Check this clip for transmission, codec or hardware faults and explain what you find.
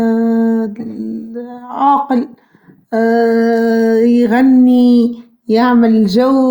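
Nothing stood out on listening to this speech recording.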